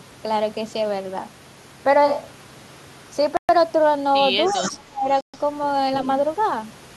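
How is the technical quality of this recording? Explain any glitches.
The recording has several separate glitches packed in after its first two seconds, each a short, distinct disruption to the speech.

From 2.08 to 3.11 s the sound turns roomy and hollow with thinner bass, at roughly the same level and with background noise around 25 dB below the speech. This is likely a switch to a distant microphone.

At 3.37 to 3.49 s and again at 5.21 to 5.34 s, the audio drops to silence for about 0.12 to 0.13 s and then resumes. This is likely a Bluetooth stall, where delayed packets left the headphone buffer empty.

Between 4.45 and 4.70 s a delayed copy of the speech trails about 0.3 s behind, roughly 10 dB down. This is likely an echo leak from incomplete echo cancellation.

From 4.53 to 5.08 s the speech dips sharply, by as much as 25 dB or so over about half a second. This is likely speech suppressed in double talk, with the canceller turning down the talker while the other side spoke.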